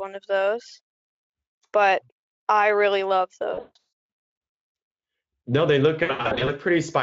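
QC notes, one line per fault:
3.53–3.77 s and 6.03–6.50 s, VoIP packet loss concealed by the speech codec: bursts of lost packets (about 340 ms and 300 ms missing, longest gaps 160 ms and 80 ms) are filled by extrapolating the last pitch and spectral envelope with decaying gain. The result is stretched, buzzy, fading speech that stays weak briefly after packets resume.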